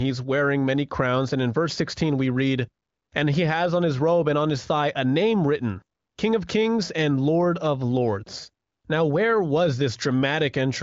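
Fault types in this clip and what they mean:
No faults present; the wideband HD Voice path is audible as a band limit near 7.5 kHz, with at most faint coding texture, consistent with AMR-WB running at a high rate of about 23 kbit/s.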